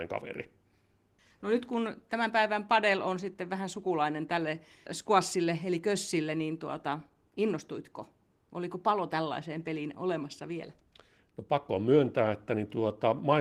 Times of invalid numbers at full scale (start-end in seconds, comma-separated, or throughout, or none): none